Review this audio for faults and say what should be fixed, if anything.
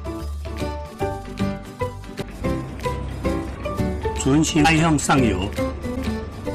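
There are four brief glitches, each about 30 ms long, at 2.21–2.24 s, 3.54–3.57 s, 4.64–4.67 s and 5.94–5.97 s, where the sound jumps ahead. The likely cause is a broken MP3 bit reservoir: frames were dropped, so the next frame reached back for borrowed data and found the wrong bytes, garbling roughly one 26.1 ms frame each time. To prevent it, cut or stream MP3 only on frame boundaries that keep the reservoir intact, or decode to PCM before editing.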